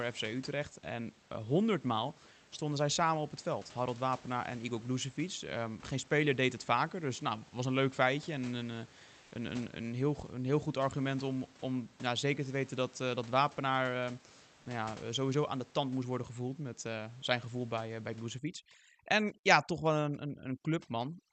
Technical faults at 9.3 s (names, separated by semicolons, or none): comfort noise in place of the background